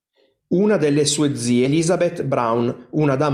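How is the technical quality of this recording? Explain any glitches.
The recording has two timing glitches in the speech.

At 1.65 to 1.67 s there is a skip ahead. Roughly 0.7 s of audio was dropped while later audio already waited. Playback jumps forward with no gap. The two sides join almost directly, so speech goes missing abruptly.

From 2.27 to 3.06 s there is a jitter buffer speed-up. The buffer held too much audio. The receiver trimmed short pitch-period pieces, removing roughly 70 ms. The speech runs at about 107% speed with unchanged pitch. It sounds hurried.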